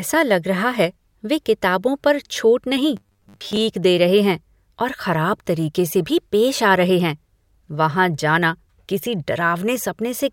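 Right after "किताबों पर छूट नहीं", from 2.97 to 3.57 s, the speech turns robotic, a rigid metallic 100 Hz buzz loosely tracking the words until "दे रहे हैं और". Likely repeated short buffers, with about half the audio replaced by a looping 10 ms chunk.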